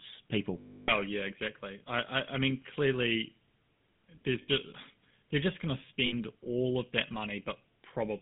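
A speech recording carrying plainly audible GSM full-rate codec damage throughout: a buzzy, gravelly roughness from the pulse-excited vocal-tract model, within a band of roughly 150 Hz to 3.6 kHz, consistent with the 13 kbps full-rate codec. Lost GSM frames occur at 0.60–0.91 s, 4.42–4.50 s and 6.06–6.13 s. Each gap is concealed by repeating the last good frame, which gives a rough metallic ring. The first loss lasts 280 ms, longer than the two 60 ms ones.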